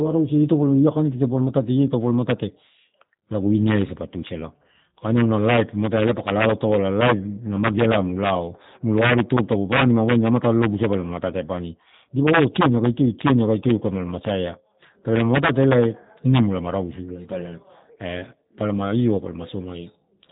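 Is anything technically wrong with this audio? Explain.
Yes, the whole clip has passed through a G.729 codec, and the damage is plainly audible. It's a low-rate VoIP coder, consistent with an 8 kbit/s stream, that rebuilds the speech from a vocal tract filter plus a pitch predictor and a handful of pulses per short frame. It doesn't send the original waveform. The top end stops at about 3.8 kHz, so it sounds muffled and phone-like, and the voice comes across slightly rough and synthetic throughout.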